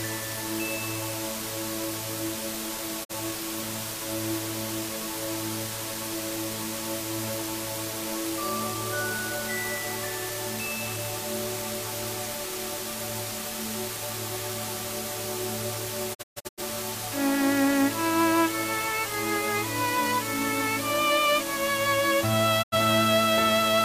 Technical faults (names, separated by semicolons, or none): low bit depth with dither; digital broadcast dropout